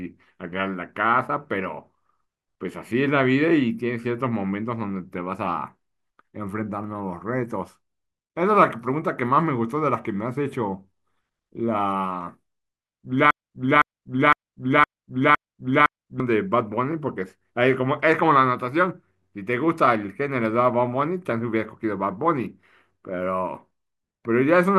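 The player or stream likely stalled and kept resending its last buffered fragment, producing a broken-record loop from 13.31 to 16.2 s: a 0.51 s piece of speech repeats exactly six times back to back, and the speech that should have played there is lost.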